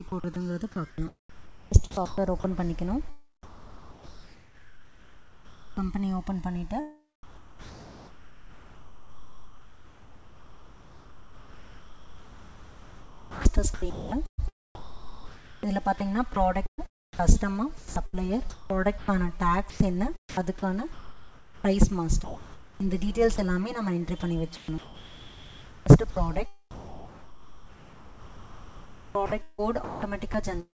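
Throughout the clip the two channels are drifting apart, which points to recorders on separate clocks differing by a few hundred parts per million. The inter-channel delay grows to around 10 ms by the end, so a mono sum gives comb notches that sweep slowly, a creeping flanging rather than a fixed hollow coloration.

From 0.08 to 2.44 s the sound is chopped by the voice detector. It repeatedly drops out for about 0.82 s in total, and the gaps fill with smooth noise rather than silence or clicks. That sets it apart from packet loss, and the cause is likely a sender's detector toggling transmission.

From 3.43 to 5.77 s comfort noise stands in for the background for the full 2.34 s. A steady, featureless noise replaces the real ambience at about 22 dB below the loud passages and with no level jump. Unlike a noise gate, it never falls to silence; it simply loses texture.

The chopping returns from 7.23 to 23.38 s, with roughly 9.8 s swapped for synthetic fill. 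It comes back again from 24.20 to 30.34 s, with about 4.1 s replaced. In both stretches edges and quiet portions vanish. The call path itself bandlimits everything to nothing above 8 kHz.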